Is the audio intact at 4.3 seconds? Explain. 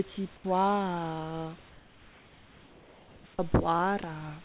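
Yes, the audio is intact at 4.3 seconds.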